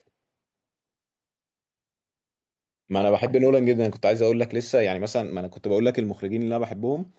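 Nothing here counts as a fault: the speech just sounds like a normal call, with the top end stopping around 8 kHz the way a call path and its codec leave it.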